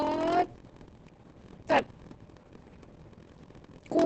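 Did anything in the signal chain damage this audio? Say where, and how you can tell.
Yes. A steady 43.1 Hz buzz runs throughout, and the speech drags at 0.938 speed. At the buffer stage, a block size mismatch (padded) zero-fills short writes into 1024-sample reads.

Throughout, the speech sounds muffled, hoarse and robotic, with nothing above 8.5 kHz. This points to heavy Opus voice compression in SILK mode, which fits a bitrate near 10 kbps.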